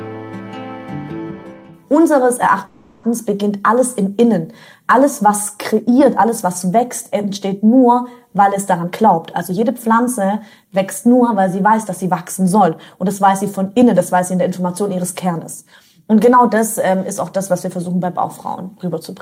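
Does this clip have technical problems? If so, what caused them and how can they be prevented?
Yes. At 2.65 s packets were likely held up in transit and the jitter buffer ran dry, causing a call audio freeze. The receiver stretched the last sound into a fading buzz or hiss until 3.06 s, inserting about 380 ms of fill, so the audio resumes where it stopped, now later. A larger, adaptive jitter buffer and a more stable network path would prevent this.

From 8.53 s to 13.83 s the jitter buffer held more audio than its target, so it trimmed short pitch-period slices over and over, a jitter buffer speed-up. The sound runs at about 107% speed with unchanged pitch and seems hurried, shedding around 0.4 s. Draining the excess backlog more gradually, or limiting how much delay builds up, would prevent this.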